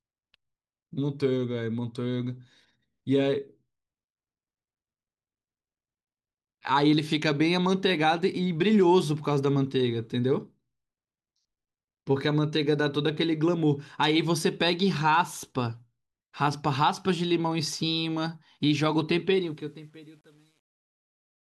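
It's a speech recording with truncation distortion on a fade near the end. The fade-out starts around 19.3 s and runs to the end, and from 19.33 s it turns grainy. It's at its worst from 19.72 to 21.48 s, where the tail sounds most gritty. Whatever applied the fade dropped bits without dither, which fits a stage keeping only about 9 bits, so the quietest part collapses into coarse steps.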